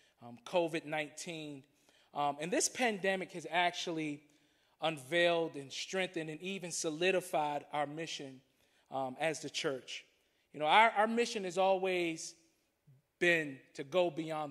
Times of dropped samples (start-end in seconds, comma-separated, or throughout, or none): 3.70, 9.47